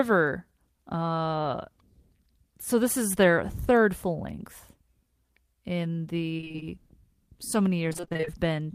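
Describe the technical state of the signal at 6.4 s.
At 6.4 s the speech is inside a burst of repeated packet loss, with robotic sound from 6.37 to 6.63 s. Seven short gaps fall in that quarter second. The longest lasts 19 ms. Each hole is patched by stretching the sound just before it, which fills about 120 ms, nearly half the span. The patches and remaining holes alternate quickly. The result is choppy speech with small pieces missing.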